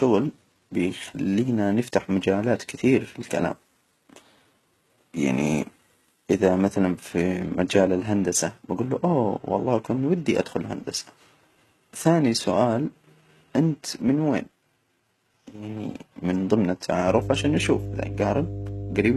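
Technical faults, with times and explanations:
throughout: HE-AAC compression. The speech carries plainly audible codec damage, and the spectrum stops at 12.3 kHz with nothing above it. The likely cause is HE-AAC at a low bitrate, consistent with around 16 kbps. Only the lower band is coded directly, and the treble is synthesised by copying lower bands upward under a coarse envelope. The upper range therefore sounds bright but not genuine. Harmonics fail to align across the crossover, and sibilants come out gritty, metallic or lispy.
17.07 to 19.16 s: mains hum. Just after "من ضمن", a steady 50 Hz tone enters and continues to the end of the clip, with low harmonics above it. It sits roughly 10 dB below the speech. This is power-line energy coupling into the signal path, typically through a ground loop or magnetic pickup from a nearby transformer.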